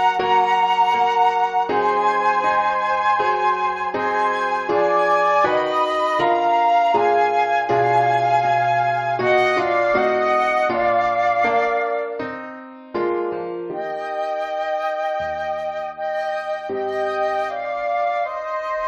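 No technical faults are audible anywhere in the audio.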